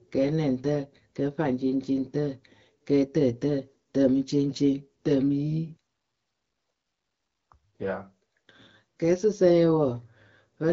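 No technical faults occur in the speech, which has passed through the AMR wideband (HD Voice) codec at 12.65 kbit/s, a rate at which that coding leaves only light traces on the signal.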